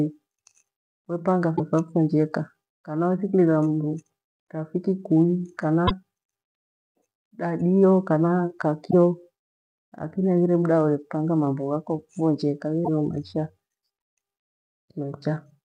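At 1.53 to 1.60 s, 5.84 to 5.91 s, 8.87 to 8.94 s and 12.82 to 12.88 s the speech breaks up briefly, the sign of damaged data in a compressed stream. Corrupted bytes make the decoder misread those frames and lose sync until it finds the next valid header, so each event is about 70 ms of disrupted audio.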